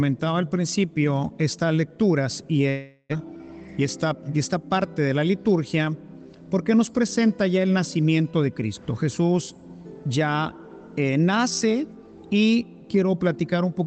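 Long network dropout, 2.69 to 3.14 s: the last sound smears into a fading buzz, about 0.4 s is lost, likely from packets that never arrived.

Jitter buffer slow-down, 3.18 to 3.38 s: the receiver repeated pitch periods to rebuild its reserve, adding 37 ms, so the sound drags at 85% speed with unchanged pitch.

Jitter buffer speed-up, 3.71 to 4.30 s: with too much audio queued, the receiver trimmed short pitch-period slices, roughly 40 ms in total, and the sound hurries at 106% speed.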